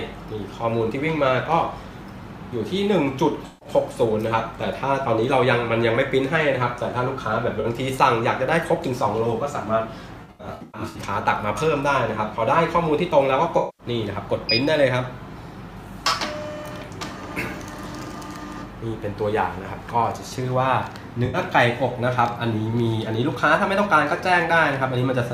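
AAC frame loss with concealment hits at 3.46 s (about 150 ms), 7.60 s (43 ms), 10.22 to 10.96 s (470 ms lost in scattered runs, the longest around a tenth of a second), 13.57 s (213 ms) and 21.25 s (85 ms). Each time the decoder fills in from the last good spectrum, with scrambled signs or interpolated energy, so the gap becomes a smeared, noisy or phasey patch instead of the hard silence or click of a plain dropout.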